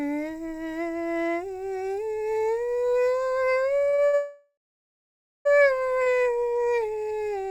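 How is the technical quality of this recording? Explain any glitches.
The music has timing glitches: a cluster of short stalls and one long freeze, all from the network path.

Short stalls from late packets hit at 3.89, 3.95, 4.06 and 6.03 s. Each time a packet turned up late, the jitter buffer ran dry and the last sound got stretched for roughly 30 to 70 ms, which you hear as a held, slightly buzzy smear before the music resumes with nothing skipped.

The call audio freeze runs from 4.15 to 5.47 s. Packets were likely held up in transit and the buffer emptied. The receiver drew out the last sound as a fading buzz that drops to near silence for about 0.9 s, then picks up exactly where it stopped, a 1.3 s gap inserted.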